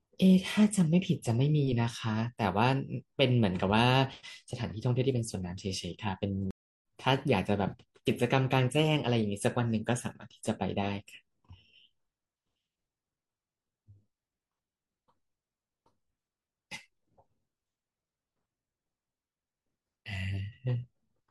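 At 6.51 s the speech drops out completely. The silence lasts about 324 ms and ends at 6.85 s. This is a stream reconnect. The connection broke, so the player fell silent, reconnected and started a new decoder partway through the stream. When sound returns, it picks up about 0.3 s further on than where it stopped. That stretch of speech is simply missing, and the jump is heard as an abrupt skip after the gap.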